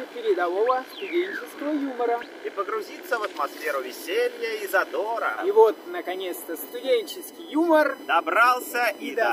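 From 3.35 s to the end there's USB whine, a steady 1 kHz whine strongest at its 3 kHz harmonic, around 30 dB under the audio, from bus frame current leaking into power or ground.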